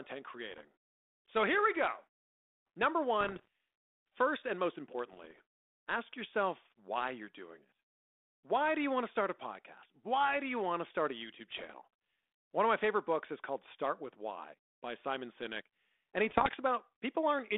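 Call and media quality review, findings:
Bit errors on an ADPCM link: pops and rough, crackly bursts with brief level jumps at 0.50–0.66 s, 3.20–3.47 s (just before "first and most"), 5.12–5.41 s (between "first and most" and "ask yourself why you're"), 11.51–11.77 s and 16.28–16.55 s. Probable component: radio or transmission link carrying the 32 kbit/s G.726 stream, band roughly 250 Hz–3.6 kHz. Error rate under one percent. Each flipped code word corrupts the decoder's step size and predictor, so damage rings on for milliseconds before it settles.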